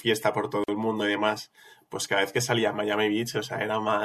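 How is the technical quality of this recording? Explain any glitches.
The recording has one glitch, a gap at a join of encoded pieces, from about 0.64 to 0.68 s. The speech drops out for 45 ms and then resumes exactly where it broke off, with nothing lost from the flow. The cause is two separately encoded segments spliced without trimming: the encoder's start-up delay and the padding on the final frame both remain as silence. On a waveform it shows as a flat stretch with smeared, softened edges; on a spectrogram it is a narrow vertical blank band cutting across all frequencies.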